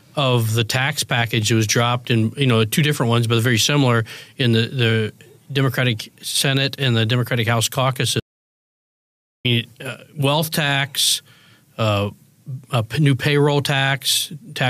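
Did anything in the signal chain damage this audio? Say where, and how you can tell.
Yes. An audio dropout to silence runs from 8.2 s to 9.45 s: about 1.25 s of silence, with no room tone, cutting in and out abruptly mid-flow. The input stage likely lost its source while the recorder kept writing zeros.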